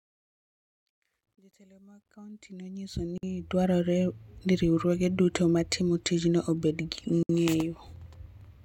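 Speech, opening on a fade-in that runs from the start to about 3.75 s. It shows truncation distortion on a fade: the gain stage seems to keep only around 12 bits with no dither. From 0 to about 2.01 s, where the level is lowest, the waveform collapses into coarse steps and the sound turns gritty. It cleans up as the level climbs toward 3.76 s. There's also a gap at a join of encoded pieces, twice and 4 s apart. The first is a dropout of about 52 ms from 3.18 to 3.23 s. The second, about 64 ms, runs from 7.23 to 7.29 s, right after "matimo tijno obed gi". Both look like separately encoded 4-second chunks butted together without trimming the encoder's start delay and end-of-frame padding. The audio stops with smeared edges, then picks up exactly where it left off.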